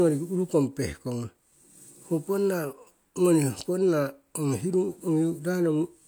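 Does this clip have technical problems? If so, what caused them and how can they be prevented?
No, nothing stood out as a technical problem on listening, so there is no cause to trace and nothing that needs preventing.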